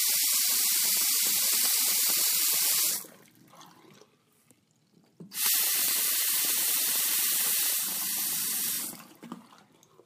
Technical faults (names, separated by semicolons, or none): repeated buffer